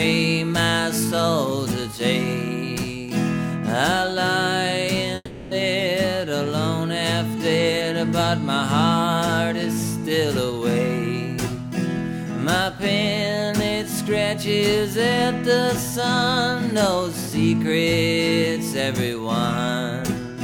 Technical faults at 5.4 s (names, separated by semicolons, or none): long network dropout